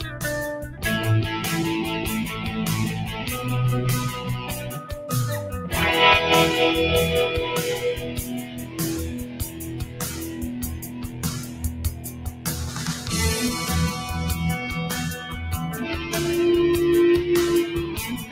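A noise suppressor applied to music or sounds sits on this whole clip. It's a speech-tuned noise reducer, so it treats anything steady, like sustained tones, ambience and decays, as noise and pulls it down. You hear the level breathing by around 10 dB as it changes its mind, with attacks poking through while held material and tails sag. The result is a pumping, fluttery or thinned-out texture.

On top of that there are specific spots of sound cut by the noise suppressor, where it clamps down harder than elsewhere. These are at 0.0 to 0.22 s (about 6 dB), 0.63 to 0.84 s (about 8 dB), 4.38 to 4.88 s (about 5 dB), 8.45 to 8.78 s (about 7 dB), 9.28 to 10.01 s (about 7 dB), 10.79 to 12.46 s (about 8 dB), and 18.15 s to the end (about 6 dB). Each one sounds like the steady part of the sound sinking or its decay getting chopped short. The longest is the stretch from 10.79 s, where it keeps ducking on and off for about a second in total.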